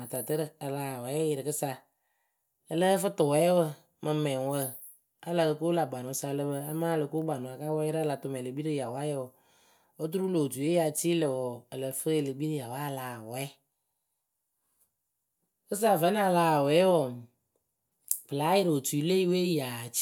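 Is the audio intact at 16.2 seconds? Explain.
Yes, at 16.2 seconds the speech plays through intact, with no dropout, click, distortion or other audible fault at that moment.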